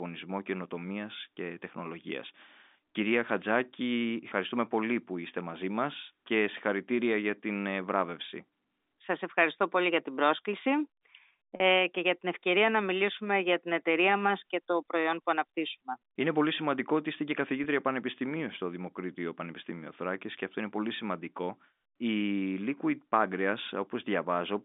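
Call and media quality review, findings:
Packet loss with pitch repetition, 11.56 s (40 ms, before "και για την ευκαιρία") and 17.64 s (20 ms, between "σημαντικό ότι είστε και" and "πανεπιστημίου στο"): brief held, buzzy tone instead of silence. The receiver's concealment repeats the last pitch period, which rules out a plain dropout. The 20 ms event fits a single lost packet.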